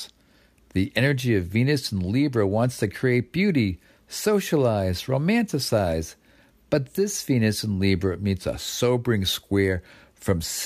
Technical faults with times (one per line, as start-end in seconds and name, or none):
8.52-10.65 resampler restarted on every block